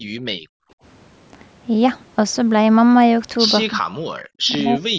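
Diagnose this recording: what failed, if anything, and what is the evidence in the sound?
Call processing stage: background gated by the echo canceller from 0.0 to 0.78 s. The room sound drops by up to about 40 dB for most of that span, then returns. A spectrogram shows the noise floor going near-black and the waveform flattening, because the canceller clamped the microphone while the loudspeaker played.

From 3.65 s to 4.98 s the talker dips by up to about 40 dB, cutting out in pieces for roughly a second in total. The waveform shows chopped gaps and the spectrogram loses energy in patches. This is likely speech suppressed in double talk: the canceller, unable to separate its talker from loudspeaker echo, turned both down.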